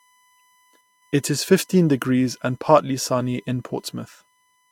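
USB whine runs throughout this speech clip as a steady 1 kHz tone about 40 dB below the speech, strongest at 1 kHz itself, as current drawn in the bus's 1 ms frames leaks into the audio through shared power or ground. Low-bitrate audio saved at a high bitrate also runs throughout. The content stops dead at 16.6 kHz and carries the artefacts of coarse compression. This is likely a roughly 57 kbit/s Vorbis encoding later saved as 256 kbit/s MP3, where the larger file cannot restore what the first codec discarded.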